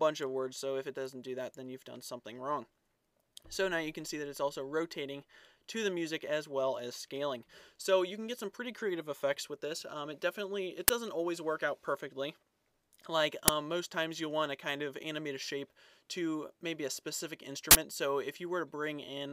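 Uninitialised buffers were played before any audio was written into them, so stale memory came out as samples: loud cracks at 10.88 and 13.48 s, and a longer 40 ms burst of digital noise from 17.71 to 17.75 s.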